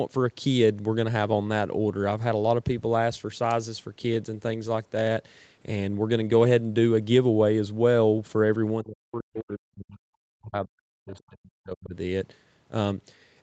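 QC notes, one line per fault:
8.83–11.95 s, speech suppressed in double talk: the talker's level dips over about 3 s in total, at worst falling roughly 40 dB. The likely cause is an echo canceller that couldn't separate near speech from loudspeaker echo while both sides talked, so it attenuated everything.
11.09–11.19 s, other side's voice leaking through: a brief scrap of a second voice surfaces inside the suppressed stretch, roughly 30 dB below the talker. It is likely residual loudspeaker echo that the canceller failed to remove from the microphone signal, heard through the 8 kHz call bandwidth.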